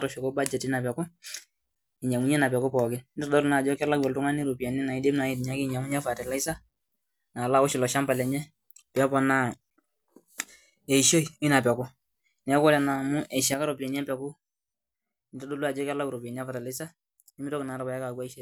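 Speech, with a sudden gain jump at 13.54 s: level drops by about 8 dB and stays down to the end. Unlike a talker moving away or a fade, the background noise falls by the same amount in one instant, likely from an unramped gain change.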